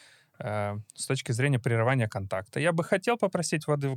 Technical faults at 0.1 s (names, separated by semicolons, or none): none